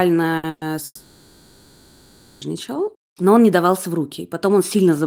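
At 0.37 s, a burst of packet loss cut off the incoming stream, and the receiver bridged about 60 ms by extending and fading the last sound before the speech resumes at 0.46 s with that stretch skipped. A second, longer burst follows at 0.49 s. About 120 ms went missing, and the concealment fills all of it, heard as a held, dimming continuation with no true silence, until the audio returns at 0.64 s.

From 0.85 to 2.44 s, a long network dropout likely interrupted delivery entirely. The receiver kept synthesising from the last received sound for roughly 1.56 s, a stretched buzz or hiss that fades away, leaving only a brief silence of about 30 ms before speech picks up again at 2.44 s. Everything spoken in that span is gone rather than delayed.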